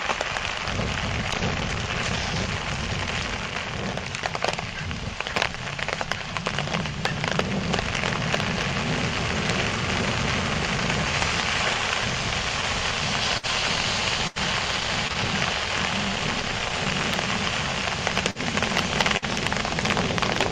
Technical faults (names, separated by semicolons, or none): dropped samples; burst of packet loss; short concealed packet loss